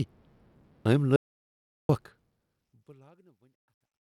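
At 1.16 s the speech cuts off into an audio dropout to silence lasting 0.73 s, until 1.89 s. The gap is silent, with no room tone. The input was likely lost while recording continued, writing silence. Speech then resumes mid-flow, before the smooth fade out that begins around 2 s.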